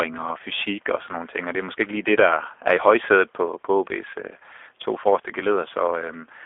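From start to finish the speech runs through what sounds like the G.729 codec, with the band held between 300 Hz and 3.5 kHz, which fits an 8 kbit/s G.729A link. Speech is rebuilt from a pitch and vocal tract model, so the roughness is plainly audible. The room noise sits about 42 dB below the speech.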